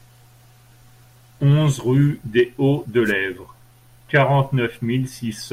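At 3.05 s the speech is hit by a wireless microphone noise hit. It lasts until 3.12 s, about 0.08 s in all. The radio link from an analogue FM microphone dipped for that moment. Reflected copies of the signal arrived out of step and cancelled each other. With the carrier weakened, the receiver's own noise rose up through the audio. It is heard as a brief swish of static laid over the speech.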